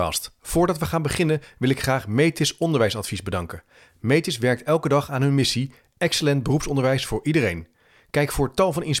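Nothing stood out on listening to this speech recording.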